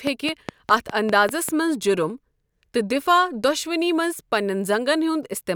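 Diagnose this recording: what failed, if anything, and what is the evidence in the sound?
Train of clicks, 0.07 to 1.5 s. About seven even pops, five per second, about 15 dB over the speech. Likely analogue interference.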